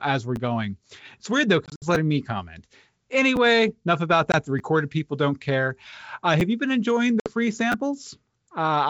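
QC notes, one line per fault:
0.36, 1.95, 3.36, 4.59, 6.4 (just before "you been enjoying") and 7.72 s, repeated buffer: short clicks or stutters as a 10 ms buffer replays with a hard join (twice at 7.72 s) because new audio arrived late.
1.66–1.85, 4.32–4.36 (after "enough about") and 7.20–7.32 s (after "you been enjoying"), packet loss on an ADPCM call: hard-edged silent holes, then speech returns slightly distorted because the decoder's predictor and step size lost step with the sender's. The first event scatters 100 ms of loss across 160 ms.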